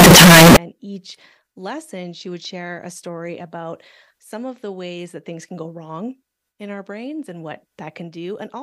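Speech opens with about half a second of extremely loud, harsh distortion, from 0 to 0.57 s, ending just before "and each lesson she". Quiet moments blare as loudly as the rest. The likely cause is signed and unsigned mixed up, which fits 16-bit samples. A flipped top bit turns each zero crossing into a full-range jump.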